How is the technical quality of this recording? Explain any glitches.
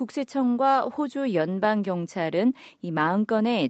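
Nothing stood out on listening; the speech carries the usual character of call microphone processing, with its top end stopping around 8 kHz and the lowest bass trimmed.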